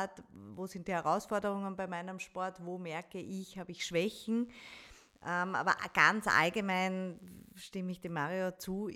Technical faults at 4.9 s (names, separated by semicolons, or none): DECT cordless phone buzz